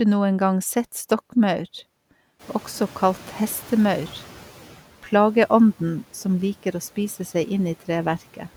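From 2.39 s the background noise in this speech jumps up, about 15 dB louder, then fades back by about 8 dB until 4.77 s. This is a noise suppressor catching up: its noise estimate lagged the sudden rise and needed 2.38 s to adapt.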